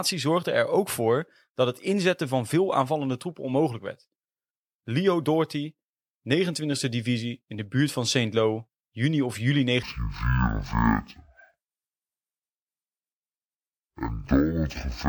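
From 9.83 s to the end, just after "juni of juli", the speech turns into a stereo read as mono fault. Interleaved left and right samples are consumed as one channel, so playback drops to half speed, a full octave lower, with a faint mirrored image in the upper spectrum.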